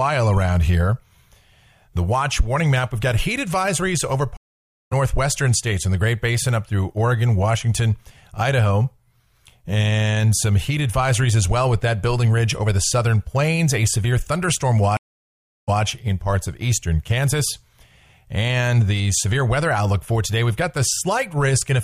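At 4.37 s the audio drops out for about 0.55 s, until 4.93 s. This is a stream reconnect. The connection broke, the player fell silent, then rejoined and started a fresh decoder mid-stream. The sound comes back about half a second further on, so a piece is skipped. A second stream reconnect runs from 14.97 s to 15.82 s, with 0.71 s of silence. This time playback resumes 139 ms earlier, so a short stretch is heard twice.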